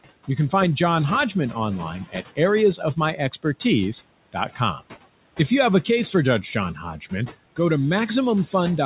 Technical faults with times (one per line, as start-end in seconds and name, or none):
0.00-8.86 noise suppressor artifacts